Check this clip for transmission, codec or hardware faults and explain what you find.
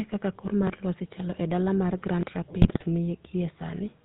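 Three faults are present: GSM full-rate coding throughout, two repeated buffers, and a burst of GSM bit errors.

GSM full-rate codec: The whole clip has passed through the original GSM speech coder, consistent with its 13 kbps full-rate mode. The coder models the vocal tract and drives it with a thinned, regularly pulsed excitation, discarding everything above 4 kHz. The result is a plainly audible buzzy, gravelly roughness over the speech, with a dull top end.

Repeated buffer: At 0.67–0.70 s, right after "kaka kor", and at 2.21–2.23 s, right after "chalo e dala mar", fresh audio failed to reach the output in time. The device replayed its previous block of about 23 ms once, which fits a 1024-sample buffer. Each instance is heard as a brief stutter with hard joins, and roughly 20 ms of real audio is skipped.

GSM bit errors: From 2.62 to 2.84 s, corrupted bits on a degraded GSM link reached the speech decoder across a run of consecutive frames. 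Damaged filter, pitch and gain parameters warp the spectrum and level frame by frame, so the speech breaks into squawks, pops and gargling for about a fifth of a second.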